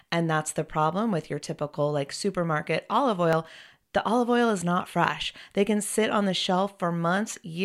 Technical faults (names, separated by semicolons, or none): clock drift buffer slips